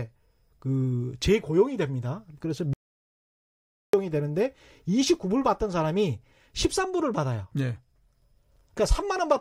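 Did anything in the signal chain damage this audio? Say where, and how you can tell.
Yes. An audio dropout to silence runs from 2.73 to 3.93 s: the speech cuts off mid-flow and about 1.2 s of silence follows, with no room tone, before the speech resumes. The input feed was likely lost upstream while the recorder kept writing empty samples.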